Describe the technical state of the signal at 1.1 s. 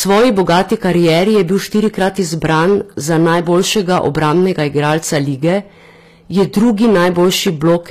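At 1.1 s the speech is being driven about 12 dB past the level a stage can pass, so around 7 percent of samples have their peaks cut flat. This hard clipping adds a harsh fuzz to every loud syllable. The treble is most likely rebuilt by HE-AAC compression at a low bitrate near 24 kbps. Nothing reaches above 14.9 kHz, and the s sounds come across gritty and metallic.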